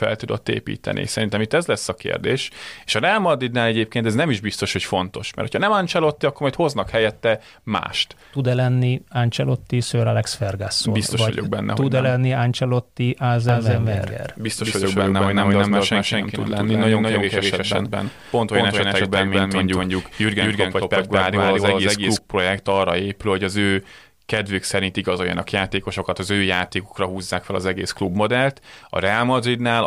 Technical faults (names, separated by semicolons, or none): doubled audio track